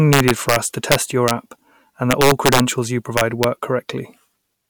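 Integer overflow breaks into the speech four times: 0.13 to 0.56 s, 0.92 to 1.31 s, 2.11 to 2.60 s and 3.18 to 3.44 s. In each stretch the signal is driven past full scale, by about 4 dB in the first and third and about 2 dB in the second and fourth. The peaks wrap around to the opposite extreme instead of being held at the limit, producing harsh, violent cracks far sharper than ordinary clipping.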